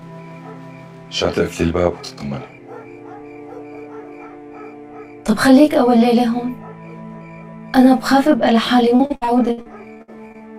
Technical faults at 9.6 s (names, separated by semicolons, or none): channel delay (comb filtering); repeated packet loss (robotic sound)